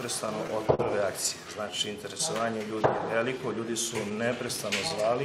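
From start to finish the timing never quite settles. Small hiccups and slight unevenness recur at irregular intervals. This is clock drift between sender and receiver. The sending clock runs slow by roughly 4 percent, so the receiver's jitter buffer keeps draining, and the receiver must keep repeating short fragments, or briefly run dry, to avoid running out of audio.

At 0.75 s a sound hangs on for about 42 ms until 0.80 s. Nothing drops out; the flow simply pauses and then resumes. This short stall from a late packet happened because a packet missed its slot and the buffer emptied. The receiver stretched the last sound for those 42 ms, then continued from the same point. That leaves the playback about 42 ms later than before.

From 1.71 s to 4.49 s small timing edits come at uneven spacing. The sound runs at about 98 percent speed. These are repeated timing corrections. To keep pace with the slower sender, the receiver repeatedly duplicates tiny pieces, all in the same direction, and together they add roughly 70 ms over the stretch.

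Between 4.09 s and 5.16 s a handful of brief ticks and smears appear, about four of them, none longer than around 10 ms. The sound stays clear between them. These are scattered short gaps. Isolated packets arrived late, and each hole was patched by extending the preceding sound. Nothing is lost, and the patching covers roughly 40 ms, a small share of the span.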